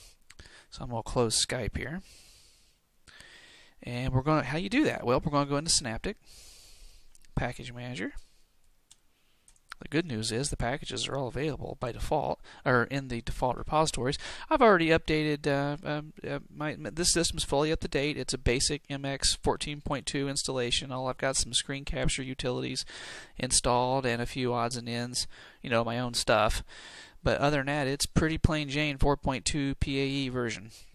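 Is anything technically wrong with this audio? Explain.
No, nothing technically wrong can be heard in this audio, and the signal stays intact and steady throughout.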